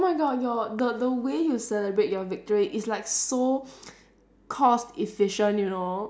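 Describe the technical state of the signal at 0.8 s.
A sudden voltage step, likely from a plug, switch, static discharge or driver glitch, enters the signal chain at 0.79 s and is gone by 0.81 s. The circuits downstream round that step into a brief pulse. The result is a single loud pop lasting about 20 ms, peaking roughly 10 dB above the surrounding speech. The speech continues underneath the pop without interruption.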